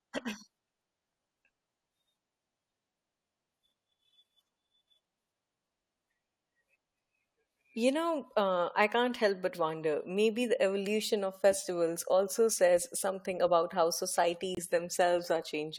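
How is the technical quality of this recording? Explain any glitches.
One glitch stands out, a corrupt frame muted near the end of the speech, from 14.55 to 14.59 s. Bits inside one compressed frame were damaged in transmission or storage, so the decoder rejected that frame and the player filled its slot with silence. The result is an abrupt dropout of about 42 ms, a length that fits a single codec frame. The sound cuts out sharply and resumes right on schedule, so the timing of the surrounding speech is unchanged.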